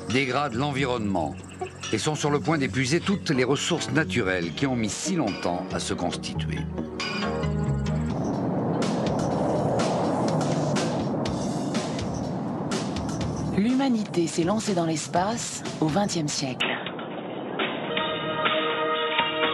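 At 16.61 s the sound abruptly turns dull and boxy, staying that way to the end at 19.54 s. Nothing reaches above 3.8 kHz. The level shifts by about 5 dB, and a faint new noise floor appears. There is no gap. The input likely switched to a poorer device.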